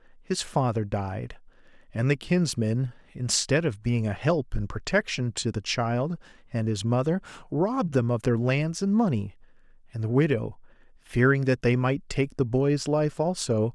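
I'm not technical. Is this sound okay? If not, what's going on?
Yes, this sound is okay, and there's nothing going on that needs explaining.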